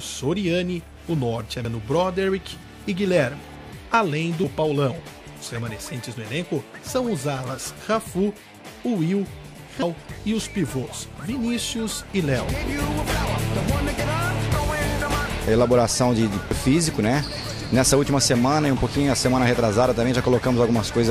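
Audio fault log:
1.65, 4.44, 9.82, 14.00 and 16.51 s: damaged data in a compressed stream. Each is a brief chirp, squawk, click or short hole where corrupted bytes made the decoder misread or refuse a frame, lose sync and hunt for the next valid frame header before normal playback resumes. On a spectrogram each shows as a thin vertical disturbance; on the waveform, a short break in the surrounding envelope.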